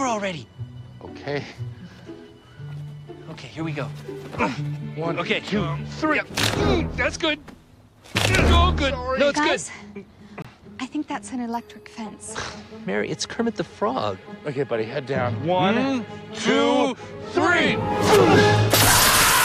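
A brief dropout at 10.42 to 10.45 s cuts the audio to 25 ms of silence, seen as a flat waveform gap and a blank vertical spectrogram strip; likely a Bluetooth stall.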